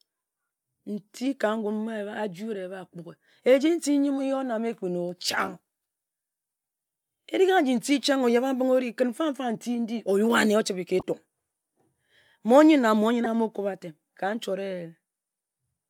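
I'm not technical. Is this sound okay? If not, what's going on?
No. Twice in this speech you'll hear a brief, unnatural blip or squeak: once from 11.00 to 11.03 s and again, a little stronger, from 13.24 to 13.26 s. This is a corrupt frame decoded. The audio was stored as small compressed chunks, and a few of them got damaged. The player played them anyway, so for a split second sound landed at the wrong pitches. That was a few chunks in a row the first time and a single chunk the second.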